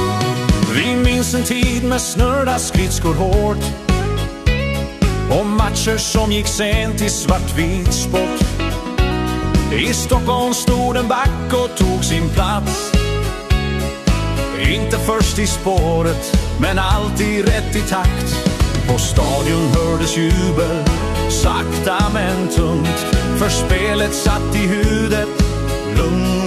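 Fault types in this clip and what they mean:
No faults heard.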